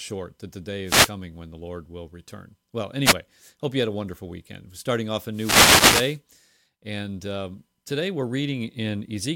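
The radio link from an analogue FM wireless microphone fades three times in this speech recording, as reflected signals cancel the direct one and receiver noise climbs through. Each wireless microphone noise hit sounds like a short swish of static, from 0.85 to 1.12 s, from 3.04 to 3.14 s, and longest from 5.31 to 6.20 s.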